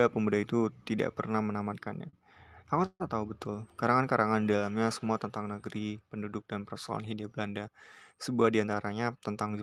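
Just after "pernah menamatkannya", from 2.09 to 2.25 s, there is a short stall from a late packet. The jitter buffer ran dry, so the last sound is held for about 36 ms before the speech resumes where it left off. Nothing is lost, and the hold is brief with no fall to silence.

From 2.86 to 3.02 s comes a call audio freeze, likely from packets delayed in transit. The speech is stretched into a fading buzz or hiss, about 138 ms of fill in all, which ends in about 30 ms of silence before the speech continues intact. The longer fill and the silent tail set it apart from the earlier stall.

From 8.44 to 9.36 s a jitter buffer speed-up plays the speech at about 111% of normal speed while keeping the pitch. Roughly a tenth of a second is trimmed in small pitch-period pieces, so the speech sounds hurried rather than gapped or held.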